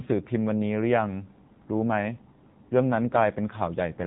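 Throughout, the speech has been squeezed through the AMR narrowband mobile codec at a low rate, which fits its 7.4 kbps mode. Sampling at 8 kHz removes everything above 4 kHz, and the sparse pulse-driven vocal model leaves the voice plainly buzzy and synthetic.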